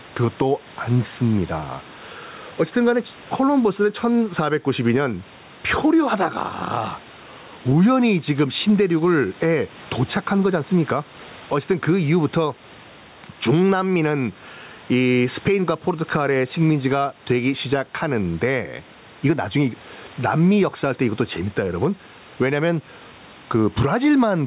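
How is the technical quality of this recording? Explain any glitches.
The recording has one fault, and it runs from start to end: gain pumping.

Throughout, the gain swings by around 10 dB, pulling loud and soft parts closer in level and squashing the sound. This is likely caused by gain set far too high, with a fast limiter clamping every loud sound. On a waveform, peaks look flattened and gaps filled in. On a spectrogram, the noise floor brightens between phrases.

The room noise sits about 33 dB below the speech. Nothing appears above 4 kHz, which matches the band edge of the G.711 call codec.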